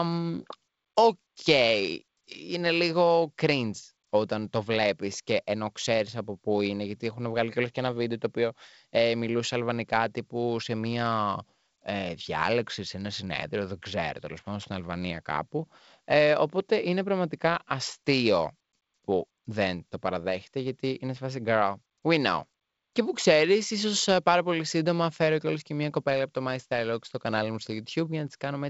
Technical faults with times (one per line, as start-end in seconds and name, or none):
none